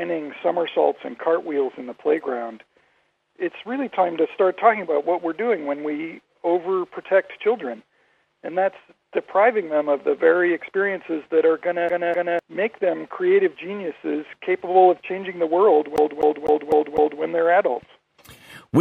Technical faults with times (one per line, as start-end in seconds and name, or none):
11.89-12.39 CD stuck on one turn
15.96-17.22 CD stuck on one turn